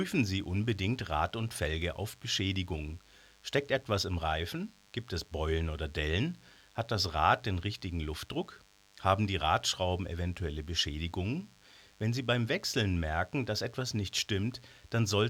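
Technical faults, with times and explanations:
Throughout: DECT cordless phone buzz. A thin, steady 100 Hz buzz with many harmonics sits well below the speech. Radio bursts every 10 ms get rectified.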